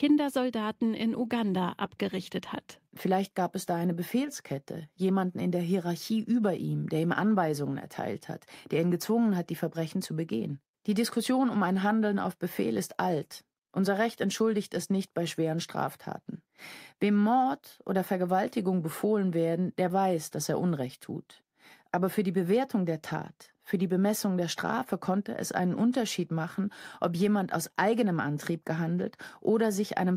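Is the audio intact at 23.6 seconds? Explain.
Yes, the audio is intact at 23.6 seconds, with nothing at that moment to interrupt or distort the sound.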